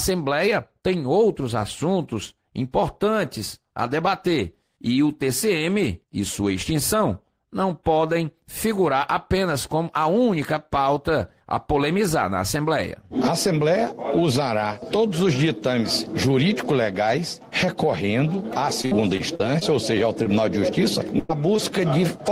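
From 18.81 to 19.63 s there is repeated packet loss, giving a robotic sound. Five gaps land close together, the longest 55 ms. Each is patched by stretching the previous sound. About a fifth of the stretch is filler, and 160 ms of real audio is lost. It sounds choppy.

At 20.23 to 20.27 s comes a short concealed packet loss. About 20 ms never arrived in time. The decoder bridged it by extending the sound before it, then blended back. The result is a brief smear or wobble.

From 21.19 to 21.31 s there is a burst of packet loss. About 100 ms went missing in one run. The receiver kept the last sound going while fading it down. That gives a held buzz or fading hiss, and the audio resumes further along.

At 21.57 to 21.60 s another short concealed packet loss drops about 20 ms. The hole is filled the same way, heard as a quick wobble.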